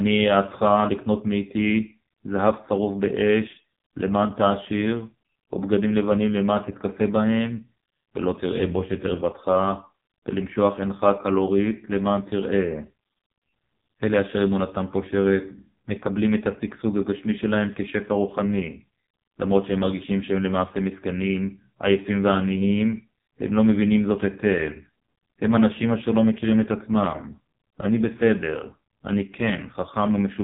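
Speech carrying heavy AMR narrowband mobile codec damage throughout: nothing survives above 3.8 kHz, and the voice sounds buzzy and synthetic, pointing to a very low AMR-NB mode near 5 kbps. Unlike a plain telephone-band filter, the vocal-tract model rebuilds each 20 ms frame from sparse pulses, leaving that artificial, robotic texture.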